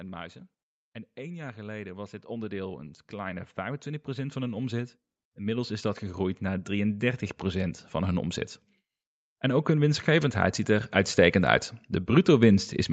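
Speech with automatic gain rising twice: a slow climb of about 15 dB from 1.15 to 8.42 s, then about 4 dB from 9.41 to 11.63 s. The background swells with the voice, so it's gain control boosting quiet input, not a louder talker.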